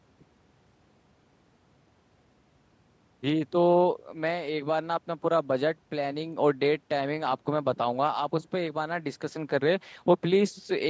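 No technical faults can be heard anywhere in this speech clip.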